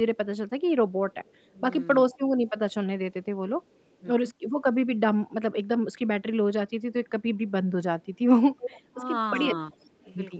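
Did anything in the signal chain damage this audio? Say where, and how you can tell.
Yes, an echo leak, likely from an incomplete echo canceller at a far end playing the call on a loudspeaker. A delayed copy of the voice trails it by 360 ms at 1.12–3.98 s and 9.81–10.15 s (faint), and at 6.69–8.88 s (much stronger). The fixed, discrete delay separates it from room reverb's diffuse tail.

Speech suppressed in double talk, in call processing, likely because the echo canceller confused the talker with loudspeaker echo. The voice dips slightly at 1.54–1.62 s and 4.0–4.05 s, then by roughly 15 dB across 8.9–10.39 s. The level sags but never drops to silence, which rules out packet loss.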